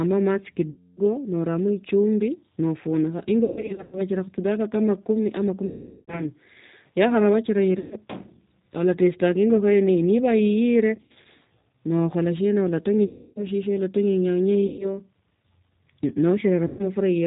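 Speech carried over the G.729 codec at 8 kbit/s, with nothing above 4 kHz and a plainly rough, synthetic texture throughout. VoIP packet loss concealed by the speech codec appears at 0.70, 3.45, 5.66, 7.79, 10.95, 13.06, 14.67 and 16.67 s. The first ends just before "noramo echumbi nafunikha". In each, the decoder stretches the last sound into a fading buzzy tone or coloured noise that recovers slowly.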